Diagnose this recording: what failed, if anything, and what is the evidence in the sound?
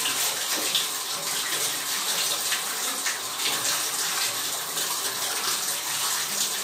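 Nothing stood out on listening to these sounds that would point to a failure at any stage of the chain.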